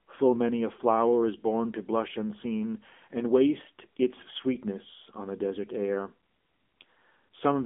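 Throughout the speech, the AMR narrowband mobile codec is clearly audible. The sound is confined to a telephone band of roughly 250 Hz to 3.4 kHz, with nothing above 3.6 kHz. The codec runs in its 7.95 kbps mode.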